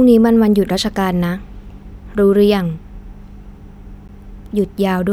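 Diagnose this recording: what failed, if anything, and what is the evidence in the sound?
The failure is at the playback stage: a CD skip at about 4.08 s, near the end of the speech. You get a tiny tick and a very brief dropout, roughly 15 ms, and then the speech carries on from a different spot, so the flow visibly jumps. That's the laser getting knocked or tripping on a disc flaw, losing tracking, and relocking onto another turn of the spiral. The player mutes while it recovers, then resumes wherever it landed.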